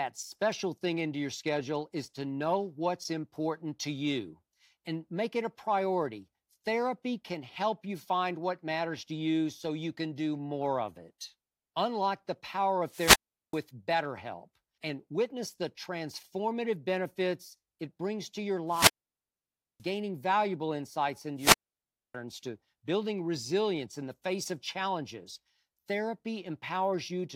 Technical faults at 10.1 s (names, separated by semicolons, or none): none